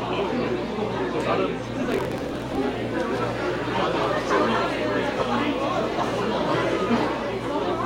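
Block size mismatch (truncated), from 1.81 to 2.58 s: one stage writes longer blocks than the next reads, so each block's tail is discarded. This causes a 45.9 Hz buzz at the block rate and a 1.07 times speed-up at roughly normal pitch, which fits a 1024-sample write block.

Corrupt frame decoded, from 5.19 to 5.22 s: a couple of compressed frames arrived with damaged bits and were played anyway. Misread gains and codes put energy at wrong frequencies, causing a brief chirp, squeak, blip or burst of noise that peaks around -15 dBFS.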